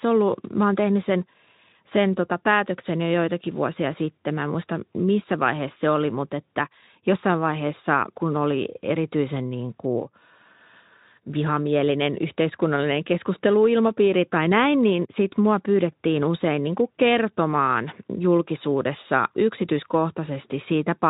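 Nothing goes wrong in this speech at any point; it comes through a Speex codec at about 15 kbps, so there's nothing above roughly 3.8 kHz and only a light coding texture on the sound.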